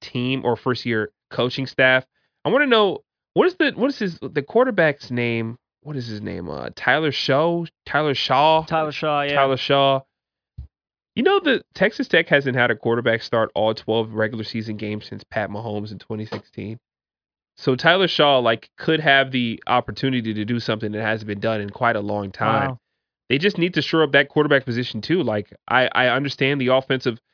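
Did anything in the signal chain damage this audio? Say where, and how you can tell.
No, nothing in the signal chain has left audible damage on this speech recording. Listening through it, I can't point to any stage where the sound was altered along the way.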